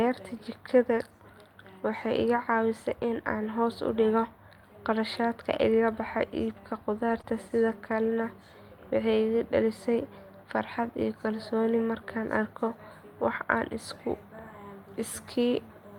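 At 7.09 s the speech turns rough and grainy for about a tenth of a second, until 7.19 s. This is a lost packet rebuilt from error correction. Packets went missing, but the packets that followed carried cheap low-bitrate copies of them. The decoder played those copies, so nothing drops out. About 60 ms was rebuilt this way, which points to three lost packets. The patched stretch sounds coarser and noisier than its surroundings.

Just after, from 7.21 to 7.25 s, comes a short concealed packet loss. Here about 20 ms of audio failed to arrive in time, and no backup copy was available. The receiver covered the hole with roughly 19 ms of synthesised sound. It extended the last sound it had and then faded back into the real signal. The result is a brief smear or flutter in the speech.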